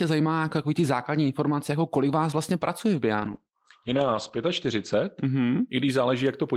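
From 3.17 to 5.75 s, after "vás vlastně pracuje v", speech goes muffled and watery, a call bitrate drop that fits roughly 9 kbps.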